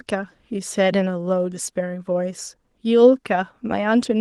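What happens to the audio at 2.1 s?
At 2.1 s the speech comes through intact, with no dropout, click or other fault at that moment, only the light coding character of the Opus voice compression carried throughout.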